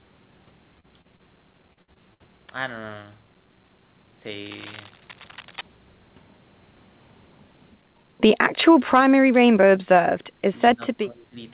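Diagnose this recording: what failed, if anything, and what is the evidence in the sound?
Network stage first: short concealed packet loss at 0.80–0.86 s, 1.01–1.07 s and 1.16–1.22 s. Each one is roughly 30 ms of missing speech, patched by stretching the last sound forward and blending back in, so you get quick smears.

Then it gets worse. Repeated packet loss gives a choppy, robotic patch from 1.73 to 2.23 s. There are four holes, the longest 58 ms, and about a third of that half-second is concealment rather than real audio. The concealer keeps extending stale sound before the next gap arrives.

Later there's speech suppressed in double talk, at the call-processing stage. The voice dips only slightly at 7.76–8.14 s, then drops hard, somewhere in the 15 to 20 dB range, at 8.76–8.92, 9.27–9.36, 10.21–10.60 and 10.76–11.39 s. The likely cause is the echo canceller ducking the talker while the far end speaks, all on a narrowband path topping out at 4 kHz that fits G.711 at 64 kbps.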